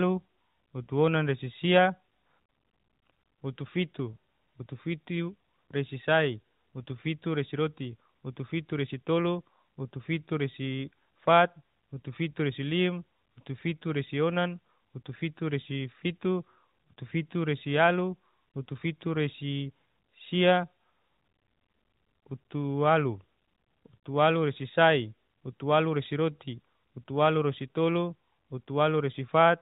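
Nothing in the speech stands out as a fault, just the narrow, phone-like sound of an AMR narrowband mobile link that tops out around 4 kHz.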